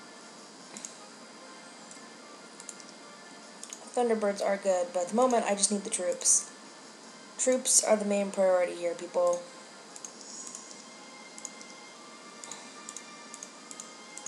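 No technical faults can be heard anywhere in the audio.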